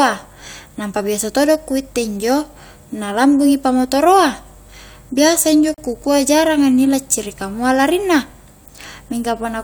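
A speech clip with a gap at a join of encoded pieces: from 5.74 to 5.78 s, about 38 ms of silence cuts in, with smeared edges. Unlike a packet dropout, nothing is missing afterwards. The sound resumes exactly where it stopped, because padding from separately encoded pieces was left in.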